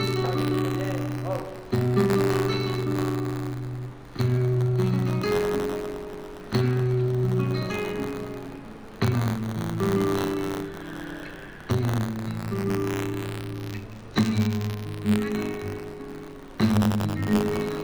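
Buffer tearing runs through the whole recording: the writing program and the playback hardware have drifted out of step, so each 512-sample period carries a small slice of audio about 30 ms stale. The hard joins produce a steady robotic buzz at 93.8 Hz whenever sound is present.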